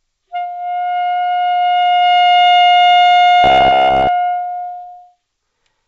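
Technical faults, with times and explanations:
throughout: clock drift between sender and receiver. The sender's clock runs roughly 4 percent fast, so the receiver must keep discarding audio, causing steady small glitches rather than one-off dropouts.
0.00–5.88 s: repeated timing corrections. The receiver trims short pieces to play at 104 percent speed, in small, unevenly spaced edits, always skipping forward, never repeating.
3.44–4.09 s: robotic sound from repeated short buffers. A rigid, metallic 66.8 Hz buzz replaces most of the sound, likely from a roughly 15 ms buffer repeated while real audio goes missing.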